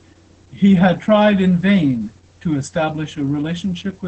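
Opus voice compression runs through the whole speech clip. The band stops near 8.9 kHz, which fits wideband SILK coding, and the excitation is coarsely quantised, consistent with a bitrate around 10 kbps. The result is muffled, hoarse and slightly robotic.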